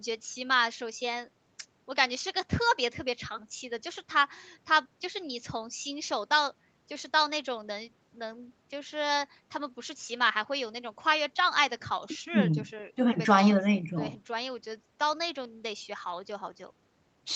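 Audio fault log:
Nothing stood out on listening to this speech recording.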